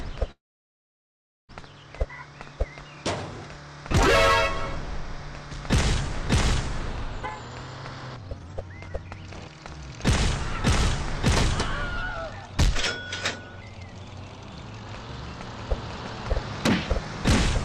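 At 0.31 s the sound stops dead, with a brief fading buzz of the last moment before it drops to silence for about 1.1 s. At 1.51 s it resumes exactly where it left off, nothing skipped. This is a call audio freeze, likely caused by packets held up in transit so the jitter buffer ran dry. The receiver stretched the final sound, then waited, inserting roughly 1.17 s of gap and pushing everything after it later by the same amount.

From 7.20 to 9.63 s the audio rushes along at about 143% of normal speed while its pitch stays put, so it sounds hurried and clipped. This is jitter buffer speed-up. Having built up more delay than it wants, the receiver snipped out many tiny pitch-period slices in quick succession, shedding around a second in total. A second, much milder pass from 13.49 to 14.72 s runs at 107%, trimming about a tenth of a second and sounding only slightly pressed.

At 15.45 s a second copy of the full-band sound abruptly joins in, about 5 dB quieter and trailing by roughly 0.7 s, and continues to the end. 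The copy carries no reverberant tail or room colouring, so it sounds like a separate overlapping track rather than an echo. This doubled audio track is likely the result of the same signal being picked up again through a slower path and mixed back in.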